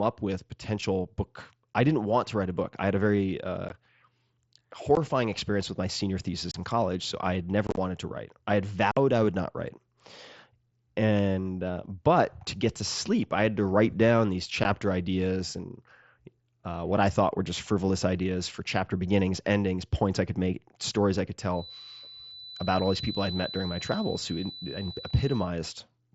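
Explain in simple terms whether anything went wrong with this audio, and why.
Six times the speech briefly drops out with abrupt gaps: at 3.69, 4.95 and 14.64 s (about 15 ms each), at 6.51 to 6.55 s, at 8.91 to 8.97 s, and at 7.67 to 7.78 s, where the gaps are scattered and sound choppy. This is unconcealed Bluetooth headset packet loss. A few tiny voice packets between headset and phone went missing, and silence filled their place instead of being smoothed over.

From 21.5 to 25.5 s a thin, steady whistle at 4 kHz sits well below the speech, its level slowly swelling and fading. This is a feedback whistle, likely from sound leaking from a loudspeaker back into the microphone and hovering just at the edge of feedback without building up.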